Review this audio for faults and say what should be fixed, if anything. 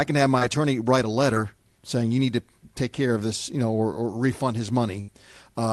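A burst of packet loss runs from 5.01 to 5.09 s. Consecutive packets arrived too late or never arrived, so the receiver extended the last sound for about 72 ms and faded it. The speech then resumes with about 70 ms missing. Enabling Opus in-band forward error correction or packet redundancy, with a jitter buffer deep enough to absorb late arrivals, would prevent this gap.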